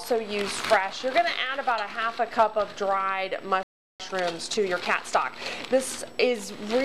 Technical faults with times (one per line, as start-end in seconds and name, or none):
3.63-4.00 playback stall
4.00-5.46 time-compressed catch-up